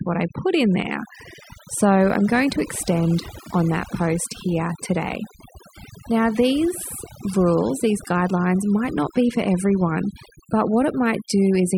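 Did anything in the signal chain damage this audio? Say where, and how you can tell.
Yes: overdone noise removal at the processing stage throughout. Pauses drop to twinkling near-silence, and quiet parts of the voice are stripped away with them. A spectrogram shows isolated speckled bins and gouged quiet harmonics.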